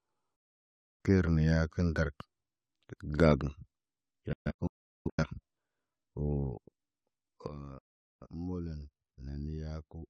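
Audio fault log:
0.36–1.01 s, 4.33–5.24 s, 7.78–8.27 s: digital broadcast dropout. The receiver mutes with a roughly 3 ms fade when frames fail. The sound vanishes for about 0.64 s, 0.64 s scattered in short holes (longest 0.38 s), then 0.43 s.
7.48 s: sudden gain jump. Sound and background noise drop together by about 12 dB to the end, likely a gain setting applied instantly without a ramp.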